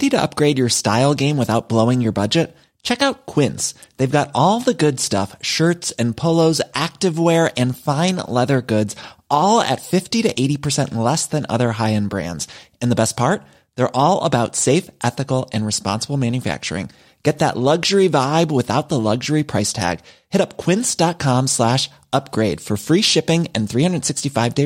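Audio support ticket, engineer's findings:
Listened through the speech recording in full and found nothing that stood out as a problem.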